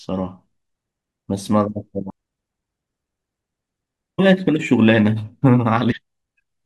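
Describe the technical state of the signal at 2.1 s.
A brief glitch cuts through the speech at 2.09 s, lasting only about 12 ms. It is a case of damaged data in a compressed stream. A small stretch of the encoded bitstream arrived corrupted, so the decoder could not read those frames correctly and lost its place in the stream. The mangled output while it searched for the next valid frame header is what produces this short glitch.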